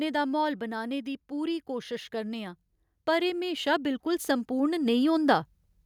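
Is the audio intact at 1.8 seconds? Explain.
No, at 1.8 seconds you're in the middle of an automatic gain rising stretch that runs from 1.29 to 5.5 s, starting right after "दा म्हौल बनाने दी". The gain control judged the input too quiet and kept pushing it up, so the speech and the background swell together by about 9 dB.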